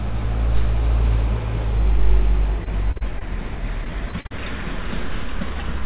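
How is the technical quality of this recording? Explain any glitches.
The recording has two bursts of choppy, robotic sound, both from repeated packet loss, carried over a call path whose audio stops at 4 kHz, consistent with a narrowband codec such as G.711.

From 2.64 to 3.22 s and again from 3.84 to 4.32 s, repeated packet loss (robotic sound) sets in. Short holes of up to about 40 ms are patched by extending the last sound, giving a choppy stutter. On a waveform these show as brief repeated or flattened segments; on a spectrogram, as smeared, striped columns.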